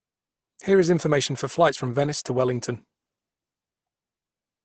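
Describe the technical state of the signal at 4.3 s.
Opus compression, present at 4.3 s as throughout: the speech is muffled and hoarse with nothing above 8.6 kHz, likely from a low-bitrate speech mode narrowing bandwidth.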